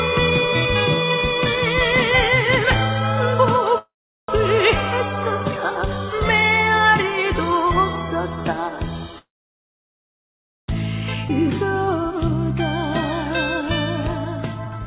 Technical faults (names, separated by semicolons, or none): call audio freeze; skip ahead; jitter buffer speed-up